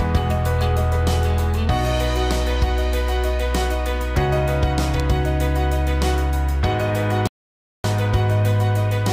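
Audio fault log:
5.00 s: electrical switching spike. A sharp snap sits on top of the sound, most likely a nearby switch or static discharge arcing into the audio line. On a waveform it is a narrow needle about 1 ms wide; a spectrogram shows a thin vertical stripe across all frequencies.
7.27–7.84 s: rebuffering stall. The sound drops to silence for about 0.57 s, then picks up exactly where it stopped, because playback ran dry and waited for more data. Nothing is lost, but the waveform shows a flat gap and the spectrogram an empty blank band.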